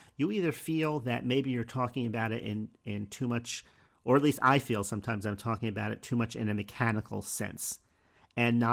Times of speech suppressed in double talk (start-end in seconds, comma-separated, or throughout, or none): none